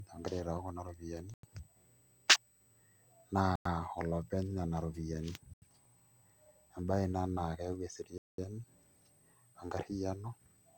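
A switching supply whistle runs through the whole clip. It sits high, between 7.97 and 8.16 kHz, and wanders slightly within that band. It is faint, about 35 dB below the speech. A switching power supply is running in an audible burst mode or beating with another supply, and the tone shifts as the load changes.

The speech also drops out four times. The gaps fall at 1.34 to 1.43 s, 3.56 to 3.66 s, 5.54 to 5.62 s and 8.18 to 8.38 s. The first three last under a tenth of a second. The last lasts about 0.2 s. Each is a hard cut to silence, then the sound resumes. This is likely a Bluetooth stall. Interference delays packets, the headphone buffer empties, and playback halts until they arrive.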